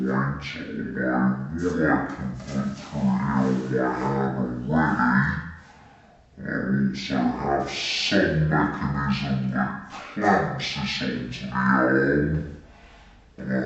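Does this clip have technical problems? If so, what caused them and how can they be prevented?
Yes. Throughout, the audio plays at half speed and an octave (12 semitones) low, with a faint mirrored copy in the upper spectrum. This is stereo read as mono: interleaved left and right samples played in sequence as one channel. Decoding with the file's actual channel count prevents it.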